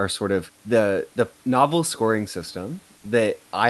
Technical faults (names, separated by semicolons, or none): none